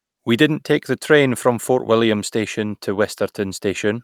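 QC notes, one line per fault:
No technical faults can be heard in the signal at any point.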